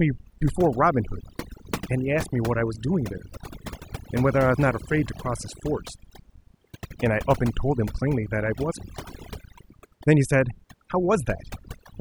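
Overdone noise removal runs throughout: aggressive band-by-band suppression leaves near-silent gaps with twinkling specks between phrases, and strips quiet detail from the voice.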